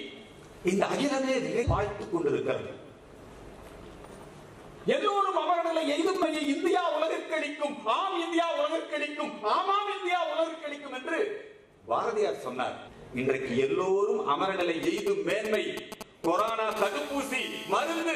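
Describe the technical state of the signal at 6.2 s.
GSM signalling bursts run from 6.06 to 6.69 s, sitting about 10 dB below the programme. A nearby 2G handset is transmitting only intermittent signalling traffic, and some part of the audio chain is rectifying that RF, turning the pulse envelope into audible sound. The result is a galloping dit-dit-dit of short buzzes at a repetition rate of 216.7 Hz, the familiar 217 Hz GSM buzz, laid over the sound beneath.

Damaged data in a compressed stream adds a second fault at 6.23 s, inside that burst window. Corrupt bytes in the encoded stream at that point cause the decoder to misread or discard the affected frame, lose frame sync and hunt for the next valid header. This produces a brief chirp or blip lasting under 20 ms.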